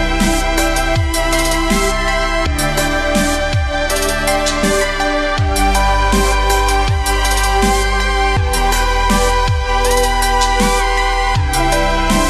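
At 2.46 s, 4.63 s and 8.36 s the audio lurches forward with compressed frames skipped. Whole 26.1 ms blocks never reach the output: about two at 2.46 s, roughly 50 ms of sound, and one at each later point, roughly 30 ms. Because adjacent frames overlap, each join is a brief smeared blip, not the sharp click of a sample-level splice, and no silent gap opens as it would in a dropout. The sound simply resumes slightly further on.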